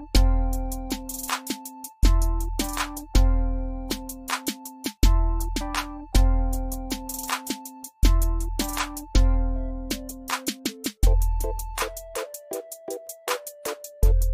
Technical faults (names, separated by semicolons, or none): none